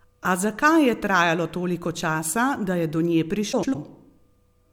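Frames out of order at 3.52 to 3.75 s: two adjacent runs of four frames, each block about 104.5 ms, were decoded in reversed order, producing a garbled flutter.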